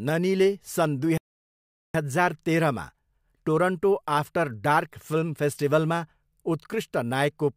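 At 1.18 s the speech stops mid-flow in a playback stall, staying silent for 0.77 s before resuming at 1.95 s with "हजार तेह्रमा". The player likely ran short of data or had its thread blocked. The waveform shows a flat gap, and the spectrogram a blank vertical band.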